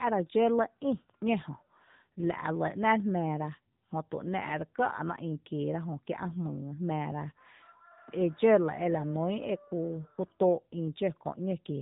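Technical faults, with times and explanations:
Throughout, AMR narrowband mobile codec: nothing passes above about 3.8 kHz, and the speech has a plainly audible buzzy, synthetic edge. This fits a low AMR-NB mode near 8 kbps, where a few excitation pulses per subframe drive a vocal-tract model in place of the real waveform.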